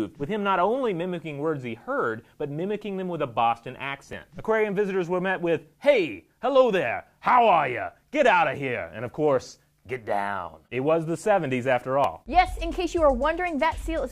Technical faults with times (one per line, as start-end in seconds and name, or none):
4.13 dropped buffer (overrun)
12.04 dropped buffer (overrun)